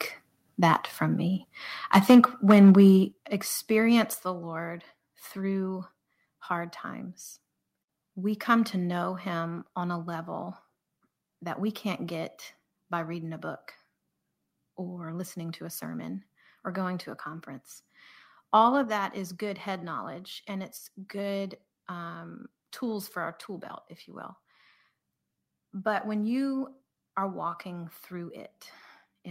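At 0.63 to 0.74 s there is a short burst of microphone overload. The loudest peaks are flattened, driving about 3 dB past the converter's limit. A small share of samples is cut, and the syllable gets a brittle, crackly edge. Right after "from me", from 1.93 to 2.83 s, the overload returns much harder, about 10 dB over, with a larger share of samples cut. It sounds harsh and buzzy until "experience the". The likely cause is input gain set too high for the converter.

Inside that distorted stretch, at 2.11 s, the microphone volume steps down by about 3 dB. Speech and background drop together at once. At 3.12 s, just before "experience the", it falls again by about 8 dB. At 4.14 s comes another step of about 4 dB. At 18.84 s, just before "that is good head", a further cut of about 4 dB follows. This is likely the call software lowering the device input after detecting clipping.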